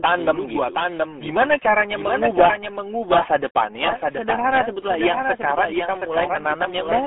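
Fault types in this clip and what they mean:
Doubled audio track: a second full-band copy of the speech trails about 0.7 s behind, about 5 dB quieter, likely a second capture path; unlike an echo, it has no decay or room colour.
RealAudio 14.4 codec: heavy gargly, muffled distortion within a 250 Hz to 3.5 kHz band, nothing above 3.7 kHz, fitting an 8 kbit/s codec; unlike plain telephone band-limiting, it garbles the speech.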